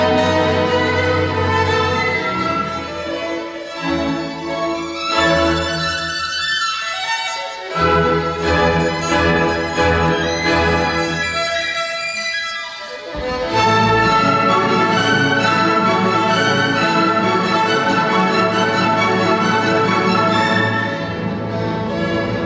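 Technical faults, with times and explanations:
No technical faults detected at any point in the clip.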